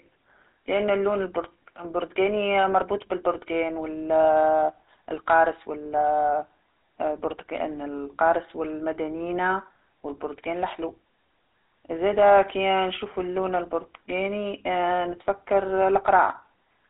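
GSM full-rate codec damage runs throughout: the speech is rebuilt from a vocal-tract model driven by sparse pulses, sounding plainly buzzy and gravelly, with nothing above 3.8 kHz.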